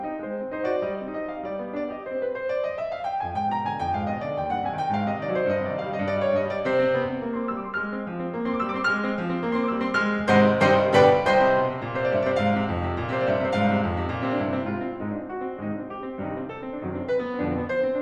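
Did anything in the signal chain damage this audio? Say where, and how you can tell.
No, nothing in the signal chain damaged this audio.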